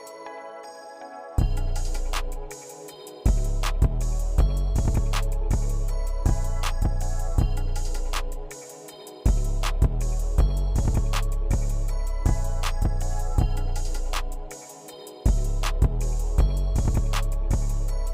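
Nothing in the audio registers as a technical fault at any point.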